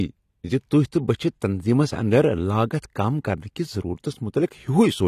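Throughout the speech, nothing sounds above 14.1 kHz. Codec damage is plainly audible. The likely cause is AAC compression, consistent with AAC-LC at 32 kbps.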